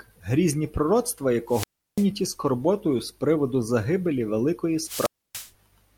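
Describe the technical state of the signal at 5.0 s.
At 5.0 s the speech sits inside a wireless microphone squelch dropout running from 4.80 to 5.52 s. The analogue radio signal fades until the receiver's squelch mutes it for about 0.29 s. Rising hiss before the hole distinguishes it from a clean digital gap.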